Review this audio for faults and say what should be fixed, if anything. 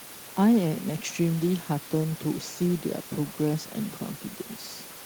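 Nothing should be fixed, as the review finds no faults in this audio.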